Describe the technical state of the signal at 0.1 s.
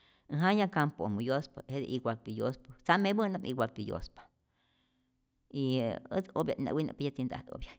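At 0.1 s the speech sits exactly on a block boundary of a resampler restarted on every block, a fault that runs through the whole clip. Each 100 ms block was converted in isolation, likely from 16 kHz up to 48 kHz, so the filter saw no true neighbouring samples at the edges and left a small error there. It sounds like a faint tick, recurring at 10 Hz whenever speech is present. On a spectrogram it shows as thin vertical broadband lines every 100 ms, and on the waveform as tiny kinks at each boundary.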